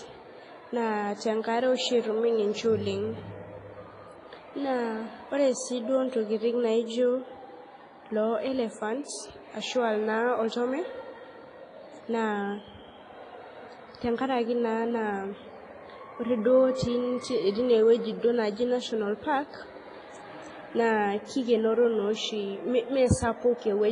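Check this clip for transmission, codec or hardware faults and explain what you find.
The clip carries one fault, a codec problem present from start to finish. It sounds like heavy WMA compression. The speech rings and smears, and a washy hiss rises and falls with the signal. Nothing is heard above 10.5 kHz. The likely cause is an early WMA encoder at a low bitrate, which fits roughly 24 kbps. Long transform blocks spread quantisation noise across tens of milliseconds. Weak spectral detail is zeroed outright.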